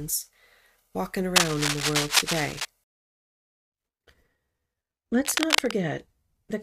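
From 1.36 to 2.65 s and again from 5.25 to 5.71 s there's cable scratch noise, rough rustling about as loud as the speech, likely from a worn connector being moved.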